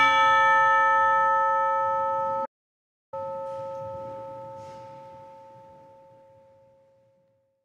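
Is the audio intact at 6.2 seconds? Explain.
Yes, the sound at 6.2 seconds is intact, with no dropout, click or other fault at that point.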